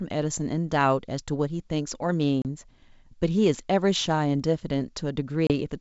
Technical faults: packet loss on an ADPCM call

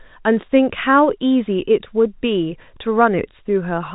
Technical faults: none

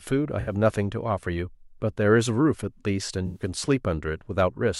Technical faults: corrupt frame concealed

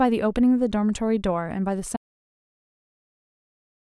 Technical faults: audio dropout to silence

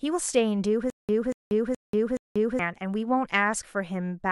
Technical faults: stutter with silent gaps

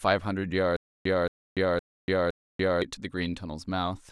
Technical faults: stutter with silent gaps

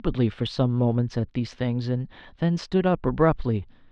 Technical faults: none

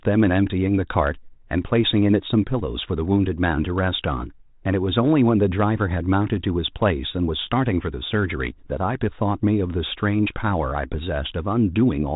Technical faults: none

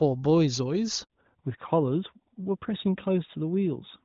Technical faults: handover gap; fallback to narrowband

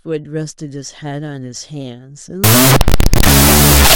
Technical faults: wrong sample width

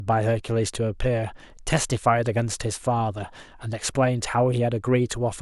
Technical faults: none

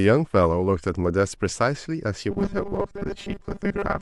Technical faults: robotic sound from repeated short buffers

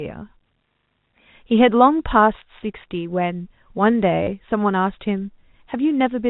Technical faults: packet loss with last packet repeated

